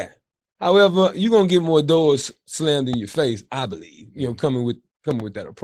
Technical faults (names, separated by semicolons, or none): Opus voice compression; loud pop